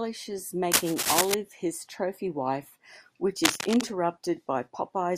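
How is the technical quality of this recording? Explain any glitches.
The recording has two bursts of cable scratch noise. From 0.72 to 1.34 s, just before "his trophy wife which", and again from 3.44 to 3.81 s, right after it, dense uneven crackle sits over the speech at roughly the same loudness. It likely comes from a worn cable or connector being moved, its contact resistance flickering. A waveform shows jagged irregular spikes, and a spectrogram shows ragged broadband smears.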